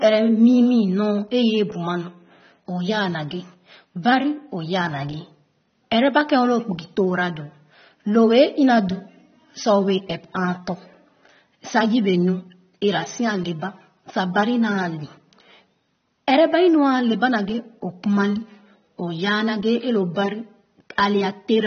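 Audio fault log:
throughout: AAC compression. The speech sounds dull and smeared, with nothing above 6.3 kHz. Sibilants and held sounds warble and fizz audibly. The cause is likely AAC-LC at a low bitrate, fitting about 24 kbps, which lowers the cut-off and coarsely quantises what remains.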